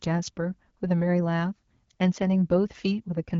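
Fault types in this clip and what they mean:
No faults are present in this speech clip. It carries the light coding of the AMR wideband (HD Voice) codec at 12.65 kbit/s, with the band up to 6.4 kHz modelled directly and the top stretch to 7 kHz filled in.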